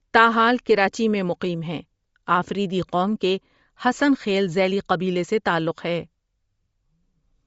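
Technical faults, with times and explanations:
Throughout, Bluetooth LC3 compression: the speech likely passed through an LC3 link at a low bitrate, with the encoder working in short transform frames that fit a 10 ms frame size and a rate near 32 kbps. With too few bits, the codec discards much of the upper spectrum and fills it with synthetic noise. The result is a plainly audible grainy, breathy edge on the speech, and nothing remains above about 7.7 kHz.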